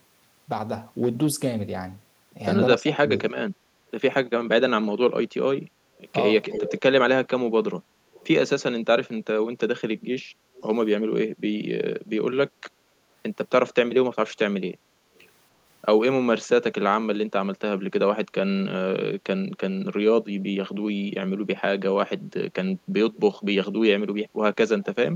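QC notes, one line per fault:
2.79–3.10 s and 24.77–25.15 s, speech suppressed in double talk. The speech dips sharply, by around 20 dB and then around 35 dB, for a few tenths of a second each time. Both sides likely spoke at once, and the echo canceller turned everything down. The second dip runs to the clip's end.
6.50–6.81 s, 8.13–8.27 s, 10.55–10.63 s, 15.15–15.26 s and 23.15–23.19 s, echo leak. A delayed copy of the speech follows it by 285 ms. It sits from roughly 10 dB to 40 dB below the speech, loudest at 6.5 s. It is likely loudspeaker sound that the far end's echo canceller did not fully remove.
10.30–10.54 s, background gated by the echo canceller. The room sound drops by about 7 dB for about a fifth of a second, then returns. The canceller clamped the microphone down while the loudspeaker played, taking the background with it.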